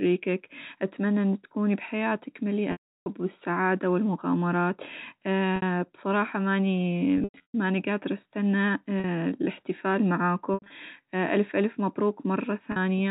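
Packet loss with pitch repetition at 2.72 s (after "أتمنى إن تكوني بحياتك"), 5.56, 7.18, 9.00, 10.54 and 12.72 s. The last pitch period loops into a held buzz, then fades, unlike a hard dropout's instant silence.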